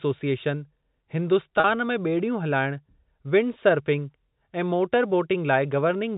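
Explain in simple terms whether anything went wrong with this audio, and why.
Packet loss with pitch repetition, from 1.60 to 1.64 s: about 40 ms of the speech never arrived, which fits two lost packets. The receiver filled the gap by repeating the last pitch cycle, so that instant sounds briefly held and buzzy rather than silent. The narrow, telephone-like tone throughout comes from ordinary G.711 telephone coding and is not a fault.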